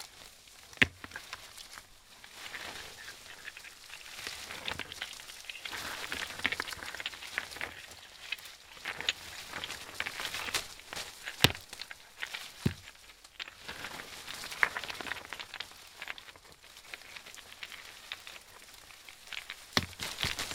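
No technical faults can be heard anywhere in this recording of sounds, and the signal stays intact throughout.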